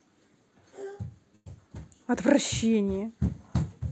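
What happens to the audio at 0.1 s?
Nothing goes wrong at 0.1 s: the speech passes through intact, with only the ordinary band-limited character of the call path and no dropout, glitch or distortion at that point.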